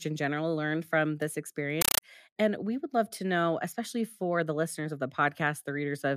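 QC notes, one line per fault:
1.81–2.02 s, compressed stream played as audio: the speech drops out under loud chattering static, 8 ms noise bursts repeating 31.25 times a second, which points to an AC-3 bitstream, probably around 384 kbps, going out as raw samples instead of being decoded.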